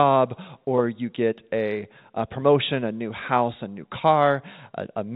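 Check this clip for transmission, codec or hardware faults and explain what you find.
Nothing faulty can be heard in the speech, which carries the narrow band of G.711 A-law telephone coding at 64 kbps, with nothing above 4 kHz and only the faint quantisation noise that rises and falls with the signal level in that format.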